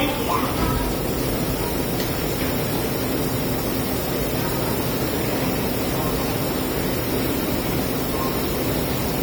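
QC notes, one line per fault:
Throughout, generation loss: the sound is swirly and hollow, with a smeared, watery quality beyond what a single lossy pass would leave, and transients lose their edges so attacks blur. The likely cause is repeated lossy coding, with the material decoded and re-encoded about four times. The character fits AAC-LC at around 64 kbit/s. Each pass quantised on a shifted frame grid, stacking noise and spectral holes, with nothing above 20 kHz.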